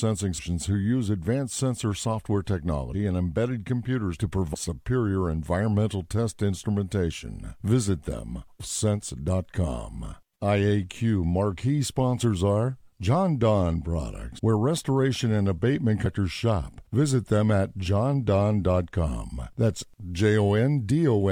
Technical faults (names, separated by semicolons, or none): compressed frames skipped